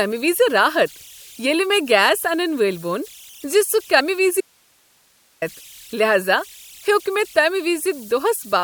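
Speech recording with a thin whistle near 3 kHz running throughout, about 27 dB below the speech. These are converter idle tones from an undithered delta-sigma converter, visible on a spectrogram as a steady horizontal line. At 3.96–4.00 s there is a short glitch: damaged data in a compressed stream made the decoder lose frame sync. From 4.41 to 5.42 s the speech cuts abruptly to hiss roughly 40 dB down for about 1.01 s. This audio dropout to a faint residue was likely caused by a break upstream while the later path stayed live, and it shows on the waveform as a sudden, near-flat stretch.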